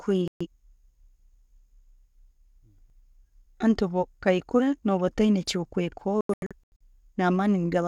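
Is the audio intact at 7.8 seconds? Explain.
Yes, the speech at 7.8 seconds plays through intact, with no dropout, click, distortion or other fault at that moment.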